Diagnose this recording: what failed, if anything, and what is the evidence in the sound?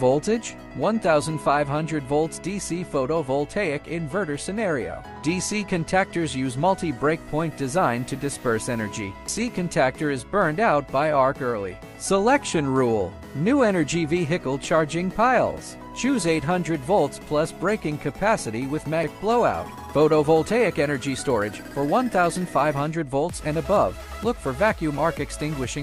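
The recorder most likely works in 10-second chunks and drops audio each time it closes one chunk and opens the next, a fault in the driver or buffer stage known as audio missing between chunks. The lost piece is not filled with silence; the two sides are butted together. This produces abrupt skips at 9.3 s and 19.0 s, each removing roughly a third of a second, so the sound jumps forward at the join.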